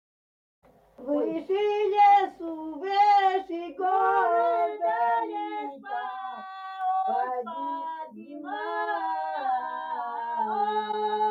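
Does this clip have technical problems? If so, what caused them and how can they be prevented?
Yes. At 6.81 s there is a bit error spike, a single sharp broadband tick unrelated to the surrounding sound. One bit in a stored or transmitted sample flipped, so the value briefly jumped by a power of two before returning. Error-checked links, ECC memory and checksummed storage prevent this.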